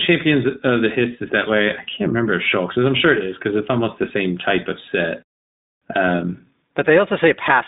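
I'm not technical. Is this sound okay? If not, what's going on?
No, the speech runs through the iLBC codec the whole way, so it sounds thin, a bit rough and robotic, with nothing above about 3.8 kHz, like an old phone line.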